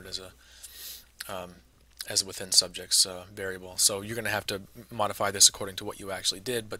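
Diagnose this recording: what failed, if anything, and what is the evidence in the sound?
Nothing in the recording points to a failure at any stage of the chain. There is no audible evidence to tie to a time or a mechanism, so no stage needs attention.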